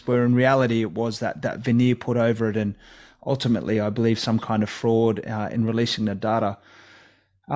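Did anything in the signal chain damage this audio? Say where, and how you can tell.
No, nothing in the chain seems to have left a mark on this speech that I can hear, so there's no stage to point a finger at here.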